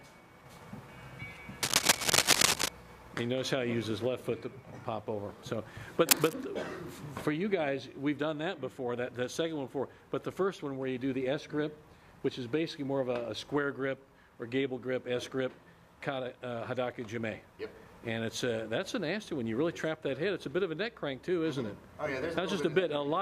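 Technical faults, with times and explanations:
1.63–2.68 s and 6.07–6.34 s, cable scratch noise: two bursts of dense, ragged crackle sit over the sound, the first lasting about a second and the second only about a quarter of a second, each a little louder than the programme itself. The irregular scratching and rustling is most likely a worn cable, connector or control being moved, so its contact resistance jumps about rapidly and injects uneven noise into the signal path.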